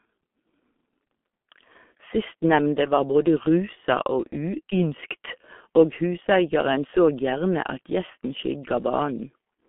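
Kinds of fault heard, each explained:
G.723.1 codec: this low-rate telephony codec, here at 6.3 kbit/s, models the voice in coarse frames and keeps a narrow 200 Hz to 3.4 kHz band, so the speech loses everything above about 3.7 kHz and sounds heavily muffled and hoarse, with smeared consonants.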